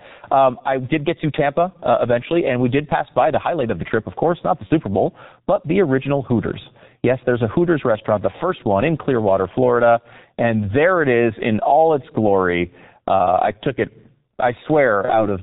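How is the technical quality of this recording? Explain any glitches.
The technical quality is poor. Heavy low-rate coding runs through the whole speech recording, and two short concealed dropouts occur.

Throughout, G.723.1 codec damage is present. Nothing reaches above 4 kHz, and the voice sounds muffled and hoarse, with smeared consonants. This fits the 6.3 kbit/s mode. Its 30 ms frames and sluggish vocal-model updates blur transitions. A simple low-pass filter would sound dull but stay clean; this sound is grainy.

VoIP packet loss concealed by the speech codec occurs twice. The first is from 4.67 to 4.72 s, just after "of course not the". The second is from 15.05 to 15.26 s. In each case a gap roughly one 30 ms frame long was filled by the decoder. It replayed its last pitch and filter at falling gain, so the speech is briefly stretched and fades, then recovers weakly rather than cutting straight to silence as a plain dropout would.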